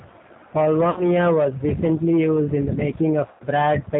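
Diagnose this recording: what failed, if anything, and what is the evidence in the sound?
G.729 codec, throughout (codec stage): the speech is rough, synthetic and capped at 4 kHz, as an 8 kbit/s coder rebuilds each frame from a vocal-tract filter, pitch predictor and sparse pulses.

VoIP packet loss concealed by the speech codec (network stage), at 0.90–1.03 s before "was recently used in" and 3.31–3.45 s after "recently used in the": 60 and 90 ms of audio are missing, so the decoder extends its last pitch and filter into a fading buzzy tone or coloured noise.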